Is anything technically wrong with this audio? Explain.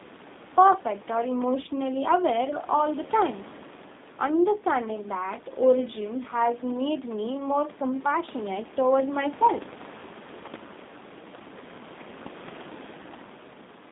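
Yes. The speech runs through a G.729 codec for its entire length, and the coding damage is plainly audible. The sound is confined to a narrow telephone band, roughly 200 Hz to 3.7 kHz, with nothing above it. The coder rebuilds each 10 ms frame from a vocal tract filter, a pitch predictor and a few pulses, and the result has the rough, slightly synthetic timbre of an 8 kbit/s codec. The room noise, about 20 dB below the speech, takes on a warble.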